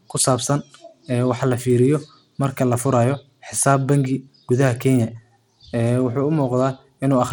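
Throughout the speech, a low-bitrate Bluetooth SBC compression stage is the likely cause: its sub-bands were coarsely quantised at a rate consistent with roughly 96 kbps. That leaves a plainly audible gritty, grainy layer riding on the speech, with content reaching up to about 20.1 kHz.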